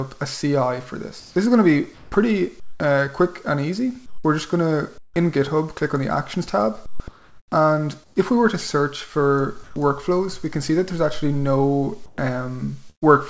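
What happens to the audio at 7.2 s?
Comfort noise in place of the background runs from about 6.86 to 8.16 s, with roughly 0.7 s of the real background replaced by a steady, featureless hiss. This is likely discontinuous transmission: the sender stopped sending audio while no speech was detected, and the receiver filled the pause with synthetic noise. On a spectrogram, the detailed background becomes a smooth, uniform band, still capped at 8 kHz by the G.722 call path. On the waveform, the envelope turns flat and even.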